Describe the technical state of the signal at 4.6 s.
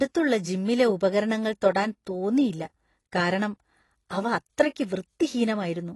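At 4.6 s the speech carries the same AAC compression damage heard across the whole clip, from start to finish. Nothing reaches above 11.5 kHz, so the top octave is missing and the sound is dull. Sibilants and sustained sounds take on a warbling, fizzy smear where coarsely quantised bands have left spectral holes. The likely cause is AAC-LC coding at a low rate; the plainly audible damage fits roughly 32 kbps.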